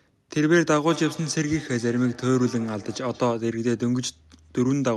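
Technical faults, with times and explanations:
0.9–3.49 s, feedback echo between two devices: the speech returns as a delayed copy roughly every fifth of a second, at most about 18 dB below the direct sound, and each return is thinner and more ringing. A second device in the room is replaying this call, and this microphone picks that playback up again, which its echo canceller does not remove. On a spectrogram, faint shifted copies of each syllable trail it at even spacing. The waveform shows small repeated bursts after each onset.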